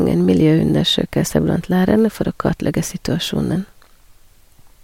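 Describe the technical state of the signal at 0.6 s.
At 0.6 s the speech signal is intact, with no audible dropout, distortion, clipping or other fault at that moment.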